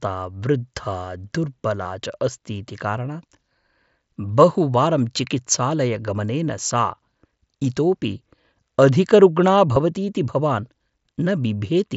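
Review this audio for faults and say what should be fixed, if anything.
Concealed Bluetooth headset packet loss: packets on the mSBC link from headset to phone dropped at 1.83 s (about 15 ms, just before "च अस्तीति"), 6.17 s and 9.76 s (7.5 ms each, the latter just before "भवतीति भवान्"). The receiver filled each gap by repeating a closely matching piece of the preceding waveform, so the single losses at 6.17 s and 9.76 s are only brief, nearly hidden glitches. Keeping the headset close to the phone with a clear line of sight, away from crowded 2.4 GHz traffic, would prevent these dropouts.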